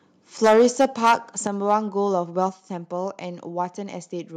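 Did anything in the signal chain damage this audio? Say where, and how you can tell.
Yes. Microphone overload at the converter: the input gain was likely set too high, so peaks ran into full scale and were flattened. From 0.44 to 1.14 s the loudest parts sit about 10 dB over the limit with a sizeable share of samples squared off, giving a harsh crackle; briefer, milder clipping, about 1 dB over, returns at 1.69 to 1.75 s and 2.42 to 2.44 s.

Microphone volume stepped down in call processing: the software likely reacted to those hot peaks by cutting the device's input gain in single steps. Voice and background together drop abruptly by about 2 dB at 0.47 s, about 6 dB at 1.47 s and about 3 dB at 2.49 s, the later two steps landing just after a clipped stretch.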